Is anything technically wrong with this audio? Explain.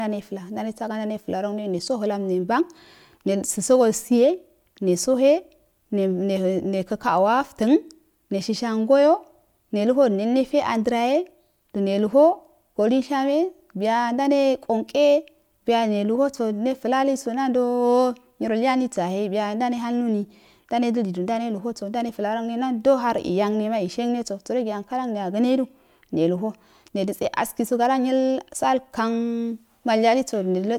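No, nothing technically wrong stands out anywhere in this speech recording.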